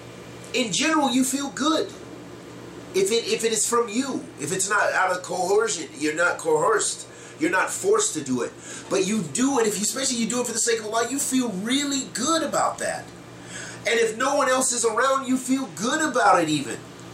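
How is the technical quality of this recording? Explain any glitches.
One glitch stands out near the end. At 16.26 s a sudden gain jump lifts the level by about 5 dB until the end. Signal and noise floor rise together, with a step visible in the waveform and spectrogram. The likely cause is a gain change applied without a ramp.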